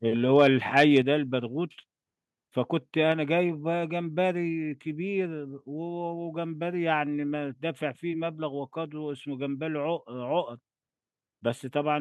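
A speech clip with two problems. The peaks at 0.35–0.47 s and 0.77–0.98 s crackle harshly, likely microphone overload, with input driven about 4 to 6 dB past the converter's limit and a small fraction of samples flattened. Right after, at 1.02 s, the whole level drops by about 4 dB, then about 3 dB more at 3.12 s, likely the call software stepping the microphone volume down.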